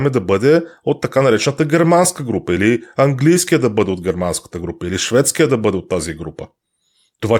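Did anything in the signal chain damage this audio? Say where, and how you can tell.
No, nothing in the chain audibly damaged this speech recording, with no stage leaving a mark anywhere in the signal.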